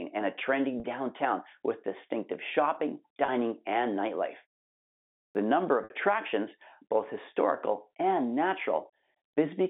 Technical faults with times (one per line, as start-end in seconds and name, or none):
0.80-0.84 packet loss with pitch repetition
3.26-3.28 packet loss with pitch repetition
5.22-5.35 clipped start after a pause
5.84-5.90 packet loss with pitch repetition